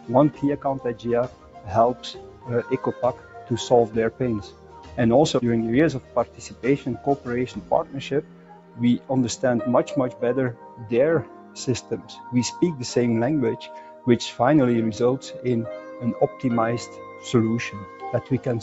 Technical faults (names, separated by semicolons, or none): noise suppressor applied to music or sounds; sound cut by the noise suppressor